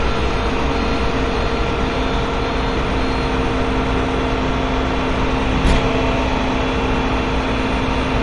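Throughout the audio, the top end is missing and the remaining sound has a gurgling, granular roughness. This is likely MP2 compression at a low rate, around 48 kbps. Starved of bits, the encoder shuts off whole sub-bands, so nothing survives above 11.3 kHz and the bands that remain are coarsely quantised. On a spectrogram the energy stops at a hard ceiling, with blocky patches flickering in and out just below it.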